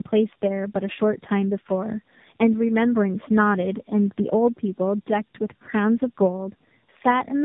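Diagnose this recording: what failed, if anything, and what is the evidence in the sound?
The codec stage failed through tandem speech coding. For the whole clip, the speech sounds rough, muffled and warbly, with nothing above 3.7 kHz. The sound points to two AMR-NB passes joined by a G.711 link. Each decode and re-encode compounds the damage.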